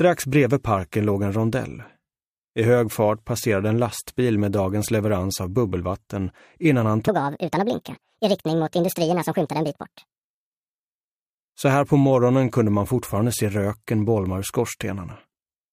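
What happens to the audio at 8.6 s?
At 8.6 s the audio sits inside a section at the wrong speed, running from 7.08 s to 10.51 s. It plays 1.58 times too fast, so timing compresses and pitch rises about seven semitones, likely from playback against a mismatched clock.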